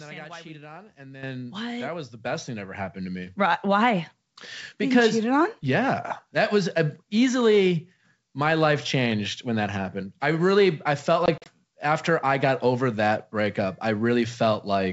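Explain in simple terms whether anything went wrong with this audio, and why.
A couple of things went wrong. At 1.23 s and again at 2.25 s the microphone volume stepped up: the software decided the mic was too quiet and bumped it, so voice and background suddenly get louder together. Around 11.26 to 11.49 s there's packet loss on an ADPCM call. About four packets vanished into short silent holes, and the decoder briefly loses track, so the sound comes back a bit off before settling.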